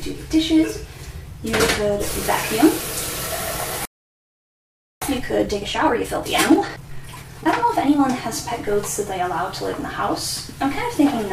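The audio cuts to silence from 3.85 to 5.02 s, a gap of about 1.16 s, which is likely a playback stall, with the player starved of data or blocked. From 5.02 to 8.02 s the sound runs hurried at 1.25 times normal speed but unchanged pitch: time-compressed catch-up, where small pieces are cut out and cross-faded to clear the backlog.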